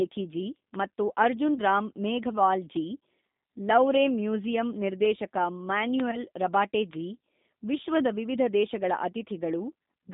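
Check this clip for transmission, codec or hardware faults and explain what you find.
Three faults are present: codec damage throughout, two concealed packet losses, and one bit error spike.

G.729 codec, throughout. The sound is confined to roughly 200 Hz to 3.7 kHz. It has a rough, synthetic edge, which fits G.729 at 8 kbit/s. The codec rebuilds speech from a filter, a pitch predictor and a few pulses per frame. Fine detail is lost.

VoIP packet loss concealed by the speech codec, from 1.54 to 1.60 s and from 6.11 to 6.26 s. Each gap is 20 ms of missing audio. The first follows "ಜಿ ಮತ್ತು ಅರ್ಜುನ್". The second comes just before "ರಬಾಟೆ ಜಿ". The decoder extends its last pitch and filter and lowers the gain. The result is a brief buzzy or noisy smear that fades. The damage lasts beyond the gap because each frame builds on the one before.

Bit error spike, at 6.93 s. A single flipped bit made one sample jump and then return. 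It is heard as one sharp, broadband tick. The tick is unrelated to the speech around it.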